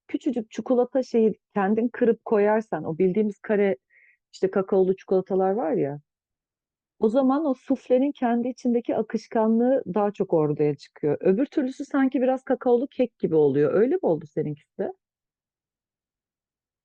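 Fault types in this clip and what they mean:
No technical fault can be heard in this speech recording. There is nothing here that needs a fault line.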